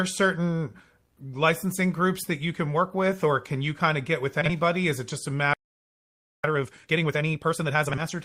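At 4.41 to 4.51 s, between "kind of get with" and "is it just a", the speech plays with frames out of order. Two adjacent 40 ms blocks of two frames each were swapped, producing a brief garbled flutter. No time is lost.

Right after "is it just a", a playback stall silences the output from 5.53 to 6.44 s, about 0.91 s. The likely cause is the player running out of data or a blocked thread. The sound cuts off mid-flow and resumes where it stopped.

Time-compressed catch-up follows from 6.44 to 8.14 s. The player works off its backlog by removing small pieces and cross-fading the gaps, so the speech runs at 1.5 times normal rate at unchanged pitch. Inside this stretch, a second frames-out-of-order event at 7.90 to 8.03 s again exchanges two 40 ms blocks, adding another short flutter.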